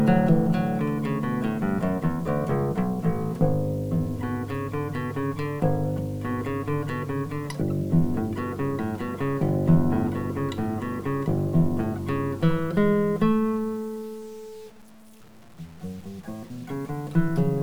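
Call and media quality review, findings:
Low bit depth without dither, entire clip: grainy, signal-following distortion; quiet passages gritty, faintest tails sputter or drop to silence. Waveform shows stair-stepped levels; spectrogram shows broadband error about 30 dB below signal, tracking level. Likely 8-bit truncation somewhere in the chain.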